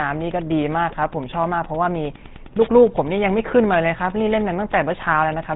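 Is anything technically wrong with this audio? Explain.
Yes. Two faults run through the whole speech clip.

The first is Wi-Fi interference. A steady tick repeats about ten times a second, every 102.4 ms. That period matches a Wi-Fi beacon. A radio near the audio circuit transmits, and the circuit rectifies the bursts into audible clicks. The ticking sits well below the speech, roughly 25 dB down.

The second is damage from the GSM full-rate codec. It is plainly audible throughout. Nothing passes above 3.9 kHz, so the speech sounds narrow and dull. The codec models the vocal tract and excites it with sparse, regularly spaced pulses. Much of the fine detail of the real excitation is discarded. The result is a buzzy, gravelly roughness on the voice. The sound fits a 13 kbps GSM full-rate stream.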